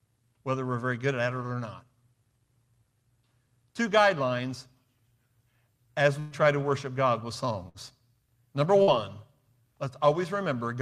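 Three bursts of packet loss interrupt the speech at 6.19 to 6.34 s, 7.69 to 7.77 s and 8.82 to 8.90 s. Each time, the receiver filled the gap by extending the last sound and lowering its level, for about 113, 57 and 51 ms, and then skipped ahead past roughly 120, 60 and 60 ms of lost audio. On a spectrogram this appears as a smeared, repeating band that fades and then cuts abruptly to new content. The waveform shows a tapering envelope before an abrupt restart.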